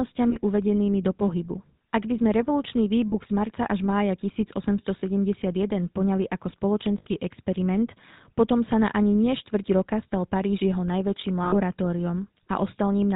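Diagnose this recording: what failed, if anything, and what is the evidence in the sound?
The speech has a buzzy, gravelly roughness throughout and nothing above 4 kHz. That is the GSM full-rate codec at about 13 kbps, in the codec stage. It rebuilds the voice from a vocal-tract model driven by sparse, regularly spaced pulses, which discards fine excitation detail.

Short rough, metallic rings occur at 0.30 s (just before "uvedenými do pohybu"), 3.08 s, 5.0 s, 6.98 s (after "poňali ako") and 11.44 s (after "jeho najväčším"). These are lost GSM frames from the network. The decoder repeats the last good frame's parameters. The 20 to 80 ms gaps fit one to four dropped frames.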